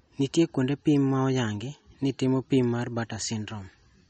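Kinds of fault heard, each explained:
MP3 compression: the encoder likely ran short of bits, at a rate that points to about 33 kbps, so it cut everything above 8.4 kHz and dropped weak frequency lines from frame to frame, leaving the speech dull, watery and swirly throughout.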